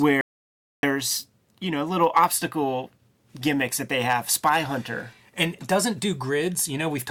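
A speech recording in which the sound cuts off abruptly at 0.21 s and returns mid-flow at 0.83 s, leaving 0.62 s of dead silence with no room tone. It's an audio dropout to silence, likely a lost input or stray mute while the recorder kept writing silence.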